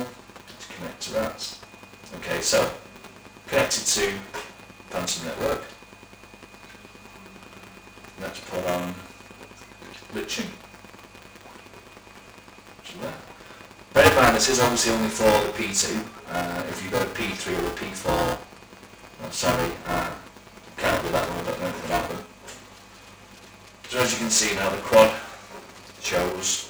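Buffer tearing runs through the whole clip: the writing program and the reading hardware have drifted so they cross mid-period, leaving roughly a sixth of each buffer filled with audio a few milliseconds stale. Hard joins produce a steady robotic buzz near 375 Hz, which fits a 128-sample buffer.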